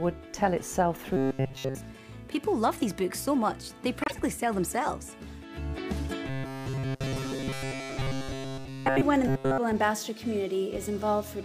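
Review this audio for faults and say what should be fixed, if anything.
Robotic sound from repeated short buffers, from 1.17 to 1.75 s, 6.27 to 9.02 s and 9.27 to 9.58 s. The likely cause is new audio reaching the playback stage too slowly, so the software kept replaying its last short buffer while fresh material was dropped. Every stretch in those spans is a repeat, and the looping imposes a steady 134 Hz buzz, which fits a buffer of about 7.5 ms, turning the sound rigid and metallic. To prevent it, give the playback path a larger buffer and make sure the upstream source keeps pace.

Corrupt frame muted, from 4.02 to 4.14 s. Flipped bits in the compressed stream made the decoder reject the damaged data, and the player filled the gap with silence. The result is an abrupt 120 ms hole, which fits about four frames lost, and the surrounding audio keeps its timing. To prevent it, protect the stream with error checking and retransmission, or conceal lost frames by interpolating instead of muting them.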